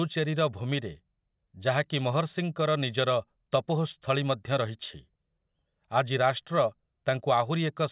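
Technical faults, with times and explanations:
No technical faults can be heard; the speech signal stays continuous and steady, with nothing breaking into or altering it at any point.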